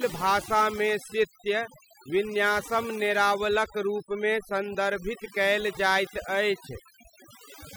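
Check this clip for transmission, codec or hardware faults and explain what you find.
One processing fault runs through the whole speech clip: overdone noise removal. From start to end, a noise reducer set too aggressively pushes individual frequency bands down or out whenever they sit near its noise estimate, taking quieter parts of the voice with them. The background drops and breaks up into twinkling specks. Unlike low-bitrate codec warble, the artefacts cluster in the pauses and the quiet voice detail rather than spreading evenly through the sound.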